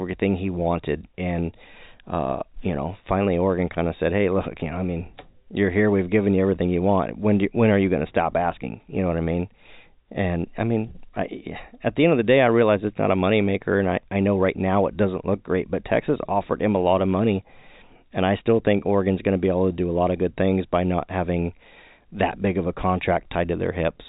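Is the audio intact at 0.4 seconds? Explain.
Yes, at 0.4 seconds the audio is intact, with no fault at that moment beyond the ordinary narrow band of the telephone coding it passes through.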